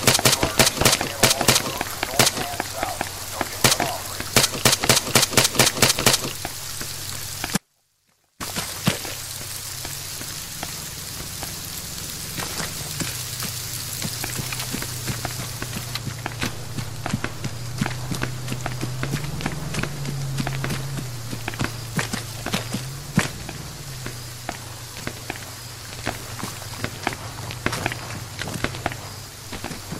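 An audio dropout to a faint residue runs from 7.57 to 8.40 s, lasting about 830 ms. The likely cause is a brief loss of the wanted signal while the path after the break stayed live. The sound cuts off abruptly rather than pausing or fading. Only a faint sound remains in the gap, roughly 35 dB below the signal's normal level, before the full sound snaps back just as suddenly.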